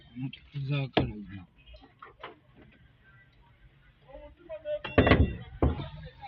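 From 1.26 to 5.78 s, a section at the wrong speed plays at 0.855x, about three semitones deep and slowed, likely from a clock mismatch; spectrogram harmonics step downward and waveform features stretch.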